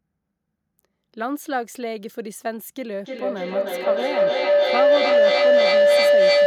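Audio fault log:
3.05–6.47 s, feedback howl: from 3.05 s a tone of around 500 Hz swells up beneath the speech and keeps climbing until it sits about 11 dB louder than the talking, pulsing roughly every third of a second as it builds, and it is still going when the clip ends. Two devices in the same room on one call are feeding each other, and each pass through microphone and loudspeaker returns more level than it took, so the loop locks onto the frequency it favours and repeats at its own round-trip delay.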